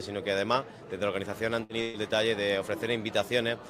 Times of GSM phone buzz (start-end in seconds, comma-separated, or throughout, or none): none